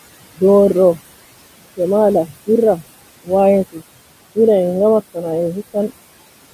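Noise suppressor artifacts run through the whole clip. The suppressor treats the steady room noise, which sits about 16 dB below the speech, as something to remove, and pulls it down by about 19 dB in the gaps. Under the speech the gain opens again, so the background pumps in and out with the talker.

At 3.72 to 3.82 s the speech is cut by the noise suppressor. For about a tenth of a second the algorithm mistakes part of the speech for noise and lowers it along with the background, with the deepest drop reaching about 19 dB. That stretch of speech sounds swallowed and faint, before normal level returns.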